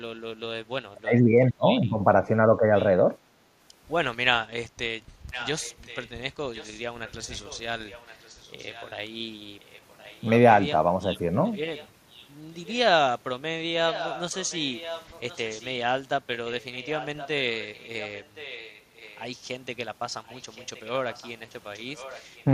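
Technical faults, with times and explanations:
0.9 to 2.66 s, speech suppressed in double talk: the voice dips by up to about 30 dB, roughly a second in all, likely because the echo canceller ducked it while both sides talked.
2.76 to 2.87 s, 5.31 to 8.93 s, 9.6 to 10.3 s, 11.53 to 12.78 s, 13.87 to 15.69 s, 16.6 to 19.24 s, 20.26 to 22.44 s, echo leak: a copy of the voice returns about 1.07 s late, some 15 to 30 dB under it and loudest around 13.87 to 15.69 s, likely loudspeaker pickup the far end's canceller didn't remove.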